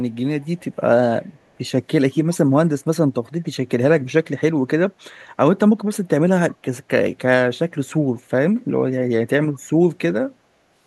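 From 0.41 to 0.62 s, a faint delayed copy of the speech trails about 0.36 s behind, roughly 40 dB down: an echo leak, likely from a loudspeaker echo canceller missing some pickup.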